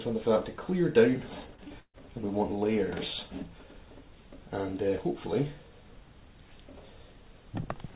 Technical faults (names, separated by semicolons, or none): short concealed packet loss; burst of packet loss